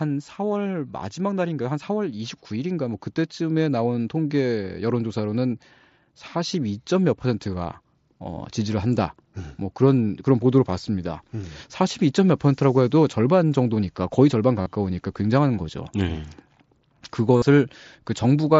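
From 2.49 s to 8.84 s, automatic gain rising sets in. The gain control judges the incoming level too low and lifts its amplification step by step, about 7 dB in all across those six seconds. Because the gain acts on everything it receives, the speech and the room noise beneath it climb together, so the whole sound slowly swells rather than the talker getting louder.

At 14.62 to 14.66 s and again at 17.37 to 17.42 s, concealed Bluetooth headset packet loss occurs on the mSBC wideband link. Each time, roughly 45 ms of speech fails to arrive from the headset, which fits a run of about six lost frames. The receiver fills the hole by repeating a matching fragment of what came just before, so the speech turns briefly into a buzzy, steady tone at full level, then wobbles slightly as real audio takes over.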